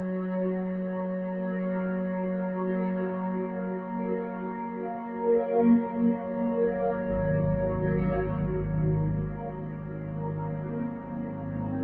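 A recording of everyday sounds, carried over a call path whose codec band-limits everything to about 8 kHz, with a noise suppressor applied to music or sounds running for the whole clip. The suppressor, built for speech, treats sustained tones, room ambience and decay tails as noise and pulls them down by something like 10 dB, while sharp onsets pass almost untouched. The level therefore pumps and flutters from moment to moment, and the sounds lose their body and natural tails.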